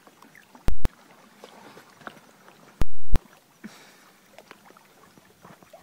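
At 0.68 s the output jumps to one extreme value and stays pinned there until 0.85 s, a 171 ms block consistent with an 8192-sample processing block. This is invalid numbers at full scale: a calculation produced infinite or invalid values that became the largest positive or negative value. It is heard as a very loud pop at each edge with silence between. The same fault returns from 2.82 to 3.16 s, a 341 ms block fitting 16384 samples.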